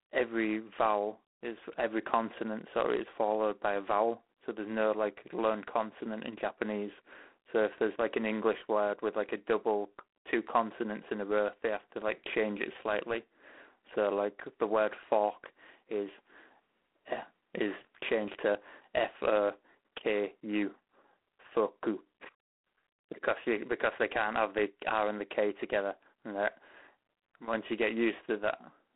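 G.726 ADPCM coding runs through the whole of this speech clip, with a harsh, rasping hiss riding on the speech and swelling and fading with its level, a roughness consistent with the 24 kbit/s rate. The coder sends only a few bits per sample describing the error of an adaptive prediction, so the quantisation noise tracks the signal. Band-limiting is also clear: the sound is confined to roughly 250 Hz to 3.5 kHz, and nothing above 3.9 kHz survives.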